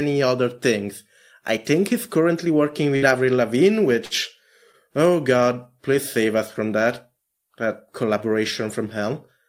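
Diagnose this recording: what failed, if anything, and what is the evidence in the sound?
Burst of packet loss at 2.96 to 3.05 s, network stage: about 60 ms of speech is missing, concealed by an extended, fading copy before the audio resumes further on.

Short stall from a late packet at 4.05 to 4.14 s, network jitter buffer: it ran empty, so the last sound is held about 56 ms, then continues with nothing lost.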